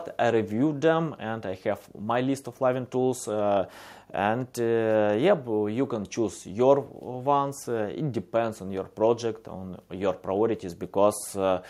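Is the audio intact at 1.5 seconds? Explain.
Yes, the audio is intact at 1.5 seconds, with no dropout, click, distortion or other fault at that moment.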